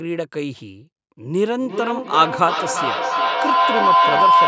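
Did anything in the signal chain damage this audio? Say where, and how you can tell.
Yes. From 1.47 s to the end, a feedback howl takes over: an acoustic loop between two devices in the same room on the call, where each trip from loudspeaker back into microphone adds gain. The repeats, roughly every 400 ms, grow instead of decaying and narrow to a tone around 1 kHz, peaking about 6 dB above the speech. On a spectrogram that is a bright horizontal line near 1 kHz thickening under the call band's 8 kHz ceiling. The waveform envelope swells in pulses.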